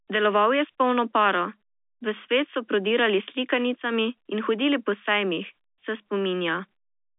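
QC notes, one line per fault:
No faults found. The audio is speech heard through G.711 A-law telephone coding at 64 kbps, which holds it to a line band of about 250 Hz to 3.6 kHz with nothing above 3.7 kHz.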